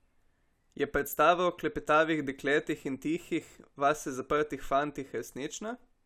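No technical faults can be heard anywhere in the recording, with the signal holding steady throughout.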